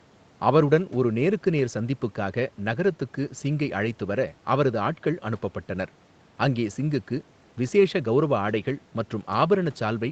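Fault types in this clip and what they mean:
No faults can be heard: the speech has passed through call microphone processing and a WebRTC call path whose codec, likely Opus, leaves nothing above 8 kHz, and its coding noise stays at the ordinary level for a moderate call bitrate.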